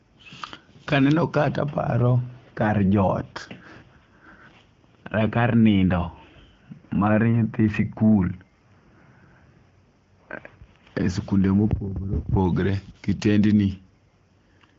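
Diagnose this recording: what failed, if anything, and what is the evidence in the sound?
Nothing stood out on listening to this recording, and no failure at any stage could be heard.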